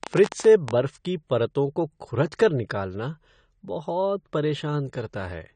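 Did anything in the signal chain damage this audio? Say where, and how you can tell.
Yes, two things got at it. The whole clip has plainly audible codec damage. Nothing comes through above 9 kHz, so the speech sounds dull and smeared, with that watery, fizzy edge on the sibilants. That's most likely AAC compression, AAC-LC at a low bitrate. What I'm hearing fits something around 32 kbps. At that rate the encoder pulls the cut-off down and quantises the spectrum coarsely against its hearing model, which is where the smear comes from.

Right at the start there's a train of clicks, running from about 0.04 to 0.72 s and ending just before "बर्फ की परतों को". That's roughly ten similar clicks at an uneven pace, averaging about 15 a second, and they sit around 15 dB above the speech. Repeated same-shaped pulses like that point to something injecting spikes upstream, likely interference from nearby equipment or a dodgy connection or power supply in the analogue wiring. 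I can't tell which from the sound alone.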